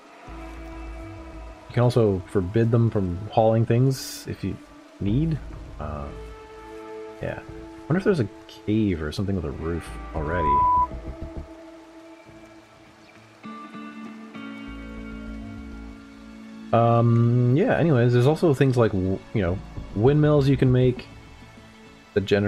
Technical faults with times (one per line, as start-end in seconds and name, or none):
10.20-10.88 loudspeaker feedback squeal